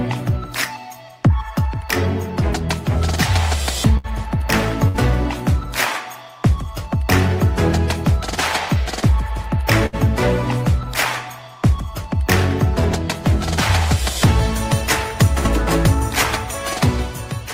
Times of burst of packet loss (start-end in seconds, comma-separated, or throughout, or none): 3.97-4.07, 4.88-4.97, 9.86-9.96, 15.39-15.47